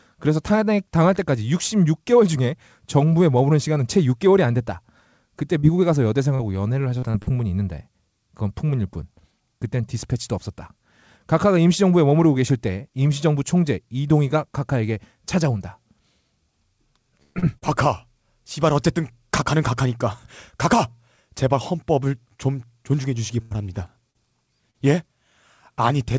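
At 5.60 s comes the first short concealed packet loss. About 40 ms of audio never reached the decoder in time, and the receiver bridged the hole by extending the preceding sound before blending back. It is heard as a brief smear or wobble. The same fault recurs at 17.39, 17.58, 24.11 and 24.71 s, each roughly 40 ms. On a spectrogram each shows as a short patch where harmonics run unnaturally flat or noise looks smoothed, with a soft seam at either edge.

From 6.35 to 7.30 s there is repeated packet loss with a robotic sound. Four separate gaps, the longest 46 ms and about 160 ms missing in all, are each patched with continued sound, so roughly a sixth of that stretch is synthetic. The result is choppy, with fragments dropped. In the waveform the envelope turns jagged, and a spectrogram shows repeated stretches of frozen, over-regular harmonics interrupting the normal texture.

At 17.23 s a burst of packet loss removes about 120 ms, ending at 17.38 s. 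The receiver kept extending the last sound while turning it down, so a voiced segment becomes a held, decaying buzz and the audio then picks up further on with the middle absent. A second burst at 23.42 to 23.54 s drops about 80 ms. On a spectrogram each burst shows as a smooth, fading smear of sustained partials with no new onsets, and the first burst's waveform tapers without ever falling to silence.

Everything sits below 8 kHz, consistent with a G.722 call codec, which fits a 64 kbps setting.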